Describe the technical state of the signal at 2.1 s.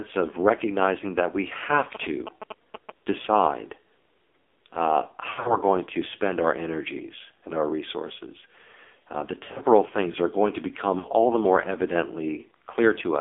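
At 2.1 s the speech is passing through an AMR narrowband mobile codec. Band-limiting to roughly 300 Hz to 3.5 kHz leaves a spectrogram with nothing above 4 kHz. The heavy buzzy, synthetic coloring points to a low mode around 5.9 kbps.

GSM signalling bursts run from 1.95 to 2.90 s. A nearby 2G phone's radio bursts are rectified by the audio circuit, producing a galloping ticking buzz at 217 Hz, somewhat below the speech. On a spectrogram these appear as vertical striations with harmonics of 217 Hz, and on the waveform as regular spiky pulse trains.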